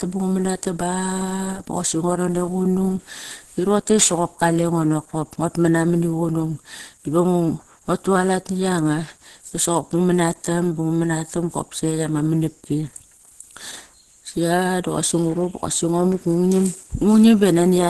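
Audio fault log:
Throughout: Opus compression, likely. Speech sounds muffled and hoarse, with nothing above 12.2 kHz. This fits the codec's hybrid mode at about 16 kbps.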